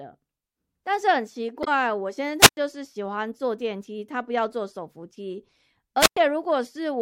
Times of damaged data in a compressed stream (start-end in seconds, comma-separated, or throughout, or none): 1.63-1.68